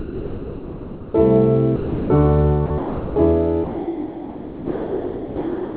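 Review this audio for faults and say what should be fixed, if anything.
The sound drops out and steady noise takes its place at 0 to 1.14 s, 1.76 to 2.10 s, 2.66 to 2.70 s, 2.78 to 3.16 s, and from 3.64 s to the end. This is likely sound dropped by the voice detector, with comfort noise filling each gap. Over the call path, nothing is heard above 4 kHz. Making the detector less aggressive or turning off discontinuous transmission would stop the dropouts.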